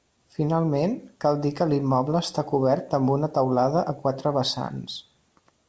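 Speech carried over a call path, with nothing above 8 kHz, consistent with a wideband codec such as G.722, and no technical faults heard.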